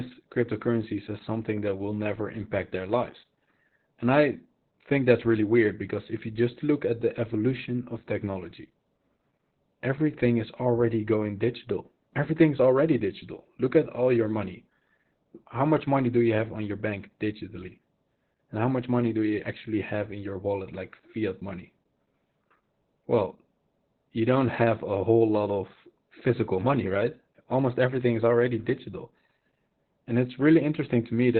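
From start to finish, Opus voice compression is running at a very low rate, consistent with roughly 8 kbps in SILK-only narrowband mode, so everything above 4 kHz is gone and the excitation is coarsely coded. The speech sounds heavily muffled, hoarse and slightly robotic throughout.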